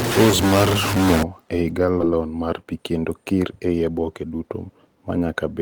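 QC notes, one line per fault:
0.00 to 1.23 s, stuck bit: The speech carries a distortion, and the gaps between syllables fill with a gritty noise instead of falling quiet. This points to one data bit being held fixed, likely from a faulty line or converter. About half of the samples are then off by that bit's weight in a pattern that follows the waveform, and the error from the stuck bit changes with the sign of small values near zero, which is why the pauses hiss.
2.01 to 2.03 s, skip ahead: Playback jumps forward with no gap at all, and the sound on either side of the jump is butted together almost directly, so the speech lurches and a chunk of it simply never arrives. Around 0.7 s of audio is missing. Later audio was already queued when the earlier stretch was discarded, as happens when a jitter buffer overflows, so the player carried on from the newer material instead of pausing.
2.11 to 4.31 s, jitter buffer speed-up: The speech runs noticeably fast and sounds hurried, about 114% of normal speed, yet the pitch stays where it was. 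The receiver's buffer was holding more audio than its target, so it trimmed short pieces of one or a few pitch periods again and again to pull the delay back down. Roughly 0.3 s was removed across this stretch, which keeps the pitch intact while compressing the timing.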